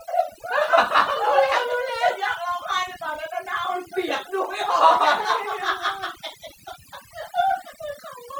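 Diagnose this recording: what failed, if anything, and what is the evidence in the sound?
Overdone noise removal at the call-processing stage runs through the whole clip. The background drops to near silence with twinkling specks. The suppressor pushes individual frequency bands far down whenever they sit close to its noise estimate, so the softer parts of the speech vanish along with the hiss. A spectrogram would show a blotchy, hole-filled floor with isolated flickering bins, and ragged gaps inside the speech harmonics.

Clock slip clicks appear from 0.12 s to 8.37 s as faint regular ticks, roughly every 50 ms, about twenty per second, close enough to blur into a soft rattle over louder, sustained stretches of speech. Each click is a single sample dropped or repeated at the converter or driver boundary, most likely where two devices run on unsynchronised clocks about 500 ppm apart. On a waveform, each slip is a one-sample step discontinuity. 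A spectrogram would show thin vertical broadband lines at an even spacing.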